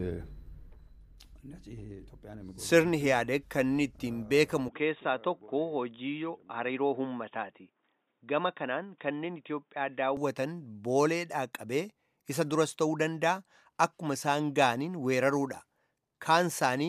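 From 4.68 to 10.17 s the input likely switched to a poorer device: the band stops at 3.8 kHz, so the sound turns dull and boxy, with a faint new noise floor far below the signal. The level stays roughly the same, with no gap at either change.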